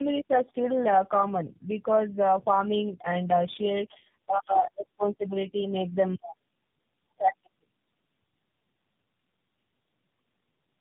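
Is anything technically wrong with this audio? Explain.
Yes. Tandem speech coding runs throughout: the speech has passed through three low-rate speech codecs in succession, with the sound pointing to a chain like G.729A, GSM full rate and then AMR-NB. Each re-encodes the previous one's errors, leaving rough, muffled, warbly speech. A spectrogram shows nothing above 3.8 kHz and smeared, blotchy harmonics.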